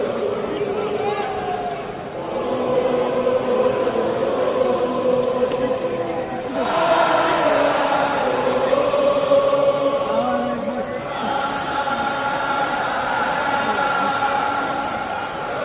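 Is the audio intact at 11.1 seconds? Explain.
Yes, the audio at 11.1 seconds is intact, with no dropout, click, distortion or other fault there.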